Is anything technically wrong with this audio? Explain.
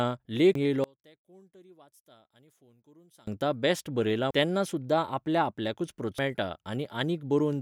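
Yes. Three brief glitches at 0.55 s, 4.31 s and just before "तेन्ना सुद्दां आपल्या" at 4.31 s, and at 6.19 s are damaged data in a compressed stream. Corrupted bytes made the decoder misread frames, lose sync and jump ahead to the next valid header.

From 0.84 s to 3.27 s the speech drops by about 30 dB to a faint remnant. This is likely one channel inverted: with one stereo channel's polarity reversed, the centred voice cancels when summed to mono, leaving only the small difference between the channels.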